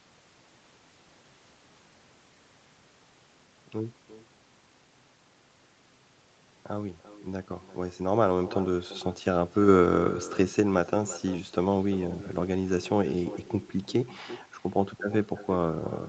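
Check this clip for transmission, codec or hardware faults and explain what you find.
One fault runs through the whole speech recording: echo with no canceller, heard from start to finish.

Every phrase is followed, after roughly a third of a second, by a fainter copy about 16 dB down. The far end is playing the call through a loudspeaker, and its microphone picks that playback up and sends it back without any echo cancellation to remove it. The returning copy has made a full network round trip and passed through a loudspeaker and a room, so it sounds thin. The speech itself is band-limited to about 8 kHz by the call codec. Room reverberation is different: it smears each sound into a continuous tail starting at once. This echo arrives late as a distinct, separate repeat of the phrases.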